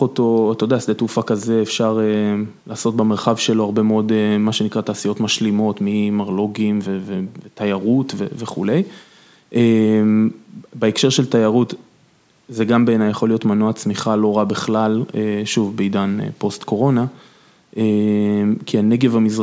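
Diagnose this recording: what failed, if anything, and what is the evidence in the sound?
Nothing failed in this recording, and the sound gives no evidence of any fault.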